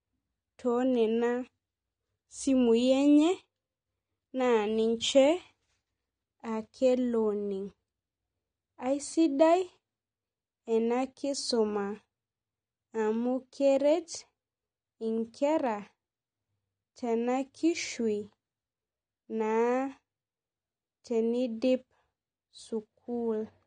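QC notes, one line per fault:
Throughout, AAC compression: the speech is dull and smeared, with nothing above 9.7 kHz and a clearly audible warbling, fizzy texture on sibilants, likely from an AAC-LC encode starved of bits, which fits a bitrate around 32 kbps forcing a lowered cut-off and coarsely quantised bands.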